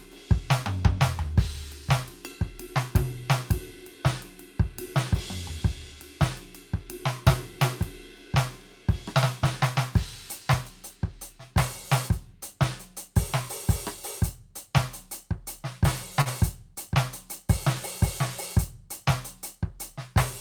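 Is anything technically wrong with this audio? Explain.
Yes. At 16.21–16.29 s the music hangs, holding one moment 43 ms too long: a short stall from a late packet. The jitter buffer ran empty, and nothing was lost.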